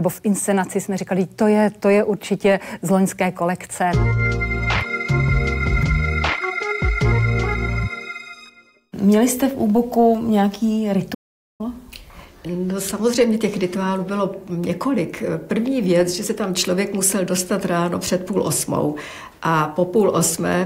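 At 11.14 s the sound cuts out abruptly and stays silent for about 0.45 s, resuming at 11.61 s. This is a playback stall: the player likely ran short of data or had its output thread blocked, leaving the output silent until it recovered.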